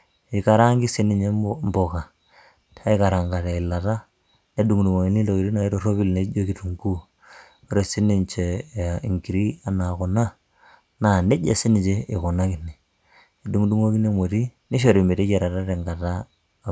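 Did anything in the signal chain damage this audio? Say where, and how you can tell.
No, nothing in the chain from capture through to playback has left an audible mark on this speech recording.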